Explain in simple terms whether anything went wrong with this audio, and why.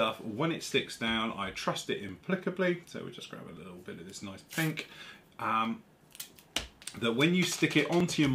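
A click comes back every 1.48 seconds, from about 0.61 s to 8.0 s. This sounds like clock drift buffer slips. Two devices likely ran at slightly different speeds. The gap built up until a tiny slice of sound was skipped or repeated.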